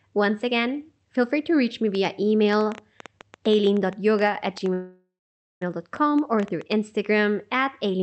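From 1.95 s to 6.73 s a train of clicks runs over the speech. There are roughly thirty, about 7.5 per second, unevenly spaced. Peaks sit about 5 dB above the speech. The likely cause is interference or a faulty connection or power supply injecting pulses.

At 4.73 s a call audio freeze begins and lasts until 5.63 s. Packets likely stalled and the jitter buffer ran dry. The receiver stretched the last sound into a fading buzz or hiss, then about half a second of silence. Speech resumes where it stopped, with nothing lost. Underneath, the call path tops out near 8 kHz, which fits Opus at around 40 kbps.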